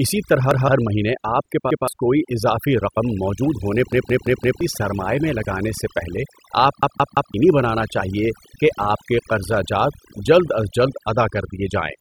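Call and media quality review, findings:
Overdone noise removal, whole clip. Background pulled down, breaking up into twinkling specks; quiet syllable tails eaten. Probable component: noise suppressor set too aggressive, gating individual bands near its noise estimate. Unlike a low bitrate codec, the damage follows the noise floor rather than smearing loud passages.

Repeated buffer, playback path. Stutters with hard joins where the last buffer is replayed instead of fresh audio. The unit repeats at about 171 ms, which fits an 8192-sample buffer, and audio is skipped rather than delayed. Unlike packet-loss concealment, the repeats are exact copies with no fade or pitch smoothing.

0.51–0.68 s: one extra play, roughly 150 ms of speech lost.

1.71–1.88 s: after "ہر مہینے آپ کے", before "کوئی اضافی"; one repeat, about 150 ms lost.

3.93–4.61 s: after "موجود ہونے", before "سرمائے میں لگانے سے"; four repeats, a long stutter, around 0.7 s lost.

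6.83–7.34 s: after "لگانے سے پہلے آپ", before "بنانا چاہیے کہ آپ"; three repeats, about half a second lost.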